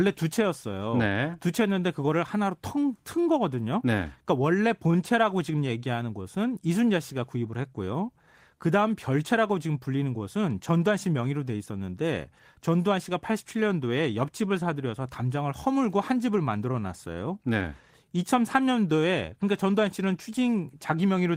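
Speech, affected throughout by clock drift between sender and receiver. The sender's audio clock runs about 2% slower than the receiver's, so the jitter buffer keeps draining faster than it is refilled. The receiver has to stretch the stream to avoid running dry, and that mismatch persists for the whole recording rather than appearing as a single event. From 0.04 s to 20.97 s there are repeated timing corrections. The receiver keeps repeating short pieces of audio so playback stays in step, giving an effective speed of 98%. Across the stretch these insertions add about half a second in total. Each edit is small and unevenly spaced, and all of them lengthen the audio.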